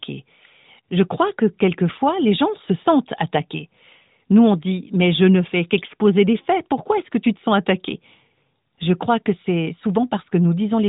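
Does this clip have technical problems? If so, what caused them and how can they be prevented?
No, nothing stood out as a technical problem on listening to this speech clip.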